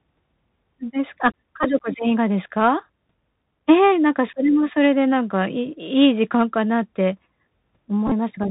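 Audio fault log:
throughout Bluetooth CVSD headset codec. The sound is squeezed into a narrow band, with nothing above 4 kHz. A granular hiss lies underneath, and s sounds turn scratchy. The codec's one-bit steps cannot keep up with loud high sounds, which fits a 64 kbps CVSD link.
1.63 s Bluetooth headset packet repeated. A brief buzz near 267 Hz, about 11 ms long, interrupts the sound. Lost packets were replaced by decoding the previous packet's bits again. The length fits three packets of 3.75 ms each.
8.07–8.12 s Bluetooth headset packet repeated. Repeated packets fill about 34 ms of lost audio, scattered over 45 ms. The longest unbroken run lasts about 15 ms. Within each run, the repeat every 3.75 ms makes a buzz near 267 Hz until good packets return.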